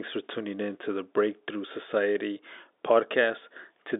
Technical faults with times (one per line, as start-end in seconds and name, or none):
none